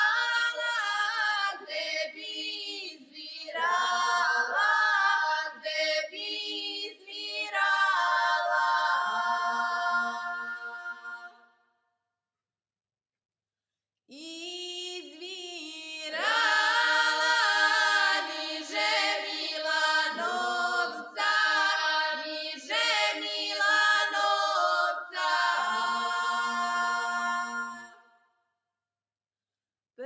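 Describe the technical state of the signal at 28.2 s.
At 28.2 s the sound falls inside a dip from 27.64 to 28.48 s. This is sound cut by the noise suppressor. The suppressor mistook this passage for noise and pulled it down by up to about 18 dB. Steady and decaying parts sink hardest, so the level hollows out for most of that stretch.

Behind it, a noise suppressor is applied to music or sounds across the whole clip. It treats sustained content and tails as noise. The gain swings by roughly 10 dB, giving a pumping, thinned character around this moment too.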